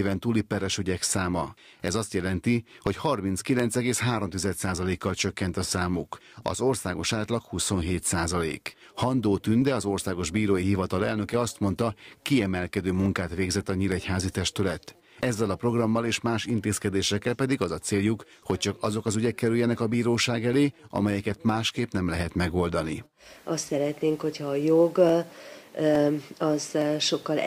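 A click recurs every 0.86 s from 0.16 s to 26.8 s, about thirty in all, likely clock drift buffer slips: two clocks a few hundred parts per million apart, dropping or repeating a short block of samples. Unlike random dropouts, the spacing never varies.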